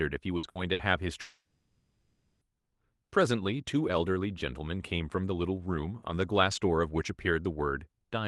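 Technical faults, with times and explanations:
0.37 to 0.46 s, 0.49 to 0.58 s and 0.73 to 0.82 s, burst of packet loss: three times in quick succession, a short run of packets failed to arrive in time, so the receiver had nothing new to play. It extended the last sound for about 60 ms, letting it fade, which is heard as a brief held buzz or fading hiss. The speech then picks up about 60 ms further on, with that stretch missing.
1.21 to 2.44 s, long network dropout: the speech breaks off into a sustained, gradually fading buzz or hiss that lasts about 1.2 s and thins to a moment of near-silence before the speech returns. The likely cause is that no audio reached the receiver for over a second, so it stretched and faded the last sound to cover the gap. About 1.2 s of the speech is missing.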